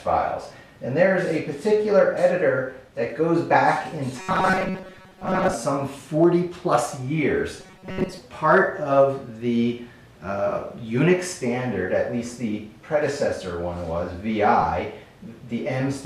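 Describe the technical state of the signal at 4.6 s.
At 4.6 s the sound has turned into a rigid, metallic buzz near 188 Hz, robotic sound from repeated short buffers, lasting from 4.20 to 5.54 s. The likely cause is audio arriving too seldom, so a roughly 5 ms fragment is looped in its place, with about 70 percent of the signal being repeats.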